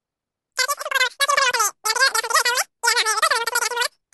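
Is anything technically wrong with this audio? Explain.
Yes. Throughout the clip there is a wrong sample rate fault: the samples are played back far faster than they were captured, with no conversion, which fits 16 kHz audio played at 44.1 kHz. The speech runs 2.76 times too fast and about 17.6 semitones too high, sounding squeaky and hurried.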